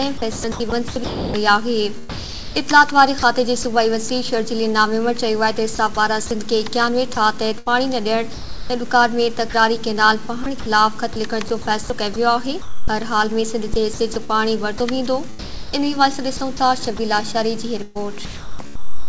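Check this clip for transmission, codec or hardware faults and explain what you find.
Yes, there is one recurring fault: sound chopped by the voice detector, in six stretches at 0.18–3.65 s, 5.75–6.31 s, 7.15–9.54 s, 10.44–12.88 s, 13.74–16.99 s and 17.83–19.09 s. The audio turns choppy, with quiet sounds replaced by comfort noise, replacing roughly 1.2 s, 0.1 s, 0.5 s, 0.5 s, 0.6 s and 0.8 s. The likely cause is the sender's voice detector repeatedly gating transmission off and substituting comfort noise. The G.722 call path, which leaves nothing above 8 kHz, is heard throughout.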